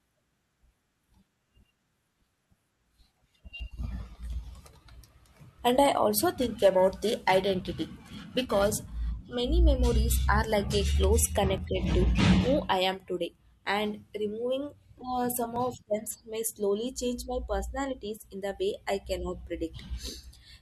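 At 3.60 s a small skip cuts into the speech. This is an overlap between stream segments. Two consecutive segments claimed the same stretch of time. The player discarded the shared part, though that sound was never duplicated. A sliver of audio vanished and the waveform jumped. The same skip returns at 7.60, 11.58 and 15.56 s. The steady four-second spacing fits boundaries between 2-second segments.

From 6.34 s, just after "I also", periodic clock jitter sets in and lasts until 9.27 s. Interference shook the converter clock at around 1 kHz. Each frequency in the speech gained sidebands about that far above and below it. The effect is strongest on higher components. It gives the speech a rough, metallic edge. The edge drops away in pauses. The skip at 7.60 s falls inside this stretch.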